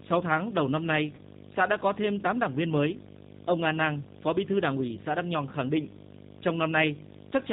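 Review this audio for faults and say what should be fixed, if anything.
Video or display buzz runs through the whole clip: a harsh 50 Hz buzz at the picture's field rate, with hash above it and a thin 15.6 kHz line-rate whine, sitting about 15 dB below the speech. Unlike mains hum, it is spiky and edgy rather than a smooth low tone, and the line whine gives it away. Separating audio and video cabling, or fixing the ground between them, should stop it.

The G.729 codec damage is plainly audible from start to finish. At 8 kbit/s, the speech is rebuilt from a vocal-tract filter, a pitch predictor and a few pulses per frame, so it sounds rough and slightly synthetic, and nothing above 4 kHz comes through. A simple low-pass filter would only dull the sound. This codec also adds grainy, artificial texture. Using a wideband codec at a higher bitrate would prevent it.

VoIP packet loss concealed by the speech codec occurs from 1.15 to 1.2 s, between "tháng đầu năm nay" and "xã đã có thêm". 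Roughly 30 ms went missing, which fits one lost packet. The decoder filled the gap by stretching its last pitch and filter into a buzzy tone or coloured noise that fades, and the speech stays weak or distorted just afterwards. A plain dropout would leave a clean gap instead. A steadier network path or a larger jitter buffer would prevent it.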